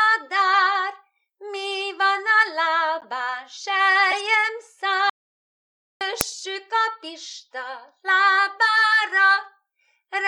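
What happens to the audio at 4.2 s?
A corrupt frame decoded at 4.11 to 4.18 s, just before 4.2 s: damaged bits in about three compressed frames were played anyway, so misread codes and gains put energy at the wrong frequencies, heard as a brief chirp, blip or burst of noise peaking around -5 dBFS.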